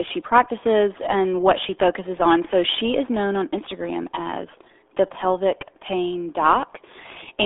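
From start to finish the speech carries RealAudio 14.4 codec damage: nothing above 3.7 kHz, a narrow 300 Hz to 3.5 kHz band, and heavy muffled, gargly distortion. That gargling, unlike a plain telephone filter, fits a modem-era codec squeezing speech into roughly 8 kbit/s.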